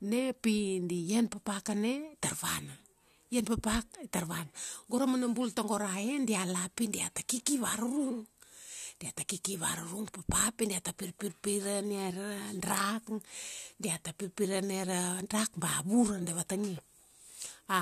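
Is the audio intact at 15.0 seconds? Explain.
Yes, the speech at 15.0 seconds plays through intact, with no dropout, click, distortion or other fault at that point.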